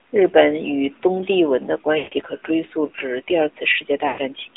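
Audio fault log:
throughout: AMR narrowband mobile codec. The sound sits in a band of roughly 300 Hz to 3.7 kHz. Nothing bright survives. Speech is rebuilt from a coarse vocal tract model and a few pulses. It sounds plainly buzzy and synthetic, which fits a mid rate near 10.2 kbps.
1.98–2.14 s and 4.08–4.21 s: lost AMR speech frames. Frames went missing for 140 ms, then 100 ms. The decoder repeats the last good settings with falling gain. The sound smears, stretches and fades, then returns briefly weak or rough.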